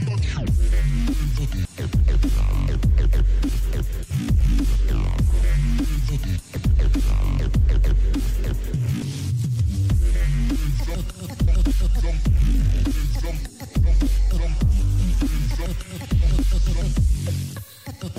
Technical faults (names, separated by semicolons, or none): audio missing between chunks